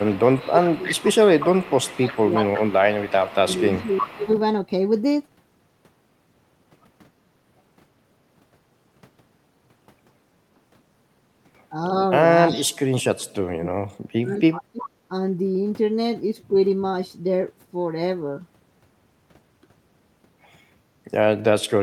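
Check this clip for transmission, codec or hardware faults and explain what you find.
Two related faults are audible in this speech, both tied to a far end playing the call on a loudspeaker: an echo leak, and speech suppressed during double talk.

Echo leak, 0.0 to 4.4 s, plus brief scraps at 12.55 to 12.63 s and 14.82 to 14.89 s: a faint, trailing copy of the speech sits about 363 ms behind the original, roughly 15 dB down in the opening stretch and about 20 dB down in the first scrap. This is likely an echo canceller that failed to strip all of the loudspeaker sound from its microphone, so part of it returned down the line.

Speech suppressed in double talk, 0.09 to 0.88 s, 1.41 to 4.28 s and 12.5 to 15.12 s: the speech sinks and partly breaks up while the other side is also talking. The dips reach about 20 dB in the first span and about 15 dB in the second. The last span is the worst, with drops near 35 dB over roughly two seconds. 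The likely cause is the same canceller, unable to separate the talker from the returning echo, turning both down together.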